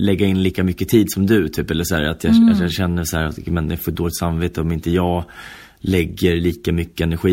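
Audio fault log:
Nothing stood out on listening to this speech recording.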